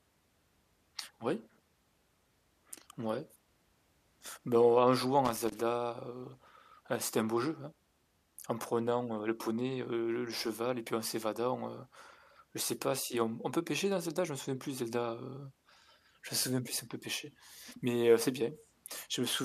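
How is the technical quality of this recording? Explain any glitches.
The speech is marred by loose connector crackle, twice. From 5.25 to 5.58 s, after "en jouant", and from 10.37 to 10.46 s, after "le poney heu le", a worn or dirty contact makes and breaks. The chopped signal gives irregular scratchy crackle.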